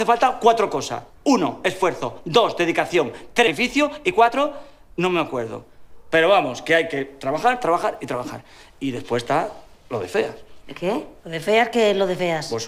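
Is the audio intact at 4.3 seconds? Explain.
No. From 3.57 to 4.80 s the sound runs about 8% fast at unchanged pitch and feels hurried. This is a jitter buffer speed-up: the receiver cut short pitch-period slices, roughly a tenth of a second in total, to drain excess buffered audio.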